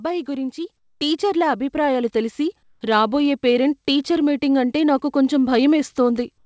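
Speech recorded over a call path whose sound stops at 8 kHz, which fits a G.722 codec. From 2.63 to 2.81 s, comfort noise takes the place of the background. For 180 ms the quiet background turns steady and featureless, about 5 dB lower. The likely cause is discontinuous transmission. The sender paused, and the receiver filled the gap with synthetic noise.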